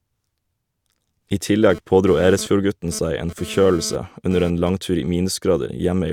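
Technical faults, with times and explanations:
1.70–4.69 s, GSM phone buzz: a raspy, harmonic-rich 217 Hz buzz at about 16 dB below the speech. It stutters on and off with a nearby phone's data bursts, unlike steady, smoother 50 or 60 Hz mains hum.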